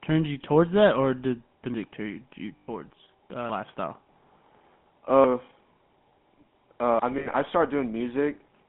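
The whole clip carries the GSM full-rate codec. The speech sits in a narrow line band, about 150 Hz to 3.4 kHz. It has a buzzy, gravelly roughness. That fits the 13 kbps GSM coder, which rebuilds the voice from a coarse pulse excitation.

From 2.56 to 2.68 s, just after "turn you", there are lost GSM frames. About 120 ms of audio is missing, which fits six 20 ms frames. The decoder repeats the last good frame. It is heard as a brief metallic ring.

At 6.99 s the sound jumps abruptly. Roughly a third of a second is gone, with the two sides butted together. This is likely audio missing between chunks, lost while a 2-second processing block was closed and the next opened.

From 7.18 to 7.36 s, more lost GSM frames follow. About 100 ms drops out in scattered pieces, the longest run around 70 ms. Each gap is filled with the same rough, ringing repeat of the previous frame.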